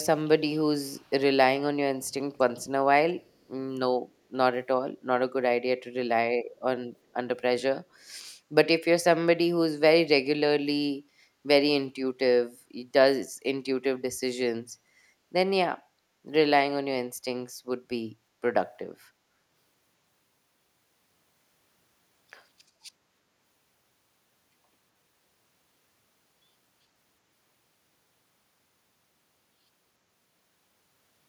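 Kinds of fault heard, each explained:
echo leak: from 0.8 to 1.11 s a very faint copy of the speech, roughly 35 dB down, repeats it 383 ms late, likely loudspeaker sound that the far end's echo canceller let back through. Unlike room reverb, it is a separate late repeat, not a smooth tail.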